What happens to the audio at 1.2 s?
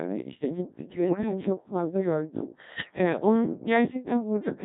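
At 1.2 s the speech breaks into warbling, bleeping gibberish, with the pitch, loudness and tone colour lurching from one moment to the next. This is bit errors on digital voice radio, running from about 1.05 to 1.31 s. Corrupted bits, roughly one in ten, land in a vocoder that spends very few bits per frame, so each flipped bit wrecks that frame's pitch, level, voicing or spectral shape. The disruption sounds like it spans about half a dozen frames.

Underneath, and throughout the clip, the voice is robotic and buzzy. That is the Codec 2 vocoder, heavily degraded here at a rate that fits about 1.3 kbit/s. Rather than keeping the waveform, it sends only pitch, voicing, energy and a rough spectral envelope, and the decoder rebuilds the voice from sine waves. The result is the synthetic timbre you hear before, during and after the burst.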